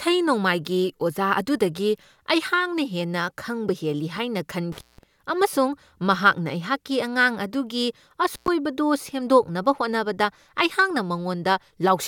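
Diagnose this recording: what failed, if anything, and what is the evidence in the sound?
The failure is an intermittent contact in the analogue wiring. The speech cuts out from 4.72 to 5.03 s, just after "ꯈꯪꯕ ꯍꯦꯜꯂꯤ ꯍꯥꯏꯅ", with the line open for 178 ms, and again from 8.34 to 8.48 s, after "ꯃꯍꯥꯛꯅ ꯑꯩꯍꯥꯛꯀꯤ ꯑꯉꯥꯡ ꯑꯗꯨꯒꯤ", open for 107 ms. A loose plug or cable breaks the signal path for a moment, so crackle marks each edge and faint hiss continues through the gap. A digital dropout would instead fall to clean silence with sharp edges.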